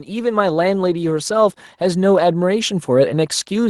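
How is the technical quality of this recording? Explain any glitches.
The recording has one clear technical glitch. Automatic gain rising, from 0.05 to 2.91 s: the automatic gain control judged the input too quiet and ramped its gain up by about 7 dB over nearly three seconds, so the speech and the background noise swell louder together.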